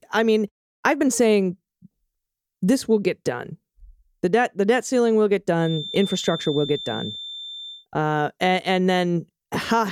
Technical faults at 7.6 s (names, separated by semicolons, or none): feedback whistle